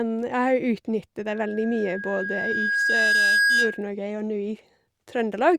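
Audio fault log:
1.26–3.88 s, loudspeaker feedback squeal: a microphone is picking up the loudspeaker it drives, and around 1.6 kHz the gain around that loop climbs past one, so the frequency keeps feeding itself on each pass. Over roughly two seconds a thin tone at 1.6 kHz rises out of the speech into a steady squeal, ending up about 5 dB louder than the speech before it cuts off at 3.88 s.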